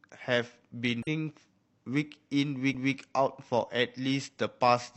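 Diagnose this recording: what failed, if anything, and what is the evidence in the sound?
Codec stage: damaged data in the compressed stream at 1.03 to 1.07 s gives a short glitch where the decoder loses frame sync and hunts for the next header.

Playback from disc: a CD skip at 2.74 s, a tick and a very brief mute as the laser jumps to another turn of the spiral, then the speech carries on from elsewhere.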